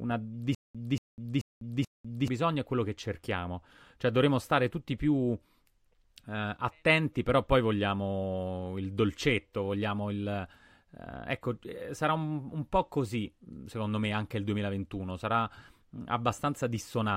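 From 0.55 s to 2.28 s the speech catches in a stutter with silent gaps: a 233 ms fragment plays, drops to about 200 ms of dead digital silence, then comes back, four times over on a steady 433 ms cycle. It likely comes from the player or stream stalling, replaying its last buffered chunk on each retry before running dry. Whatever should have filled that stretch is simply gone.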